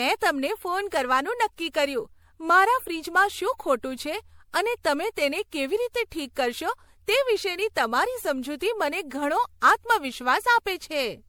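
Throughout the speech, a swirly, hollow smear and blurred consonant attacks suggest generation loss, likely from re-encoding about five times in a chain that points to MP3 at 96 kbit/s. Unlike a single low-bitrate encode, the artefacts are worse than that rate explains, though content still reaches 20.6 kHz.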